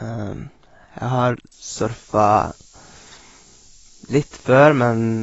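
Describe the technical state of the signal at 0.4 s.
At 0.4 s the speech is dull, with nothing above 7.6 kHz. This is likely AAC compression at a low bitrate near 24 kbps, smearing sound throughout.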